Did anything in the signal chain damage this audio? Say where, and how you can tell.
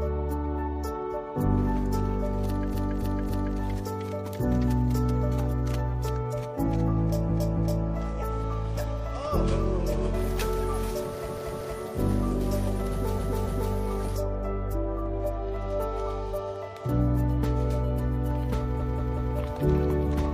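Yes. Five stutters loop short chunks of sound: 2.70 to 3.53 s (a 0.28 s block played three extra times), 7.25 to 7.81 s (0.28 s, twice more), 11.24 to 11.71 s (0.23 s, twice more), 13.15 to 13.70 s (0.28 s, twice more) and 18.76 to 19.32 s (0.19 s, three more times). These are repeated frames from the codec or storage stage. Blocks of whole compressed frames, which fits runs of four to six frames, were written or delivered again, so the decoder replays them and lengthens the audio.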